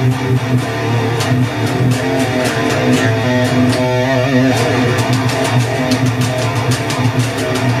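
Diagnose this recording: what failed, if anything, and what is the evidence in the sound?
Video or display buzz enters at the analogue wiring. A steady 75 Hz buzz with hash runs throughout, roughly 25 dB below the signal. A screen's field rate is coupling into the audio path.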